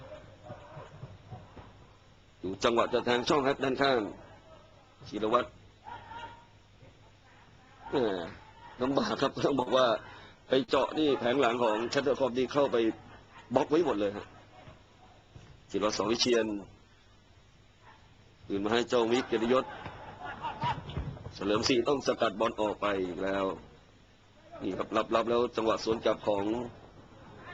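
The audio has three instances of short concealed packet loss, at 2.51–2.54 s, 9.62–9.68 s and 10.64–10.70 s. In each case a block of data, about 20 ms in the first and 40 ms in the other two, failed to reach the decoder in time. The receiver covered each gap by extrapolating the preceding sound and crossfading back into the real audio. This is heard as a brief smear or wobble, shortest at 2.51 s.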